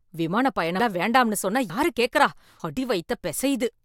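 Speech that likely has audio missing between chunks: the capture seems to run in 1-second blocks and drop a short piece at each handover. Skips of about a tenth of a second fall at 0.80, 1.70 and 2.60 s, with the surrounding sound butted together without a gap.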